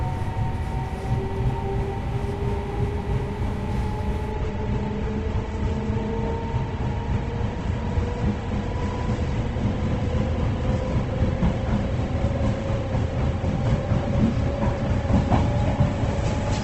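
At 4.31 s the adaptive stream drops to a lower bitrate for the rest of the clip. The treble abruptly stops near 8.2 kHz, fitting a step from roughly 64 to 16 kbit/s, with no gap, unlike a dropout.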